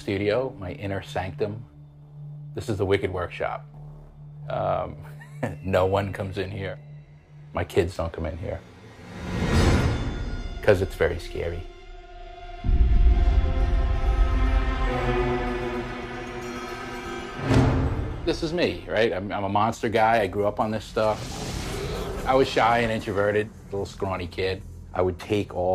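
Nothing stood out as a technical problem on listening to this recording.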